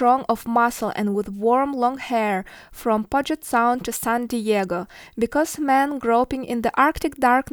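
Nothing in the recording stands out as a technical fault; the speech comes through without any glitch or defect worth flagging.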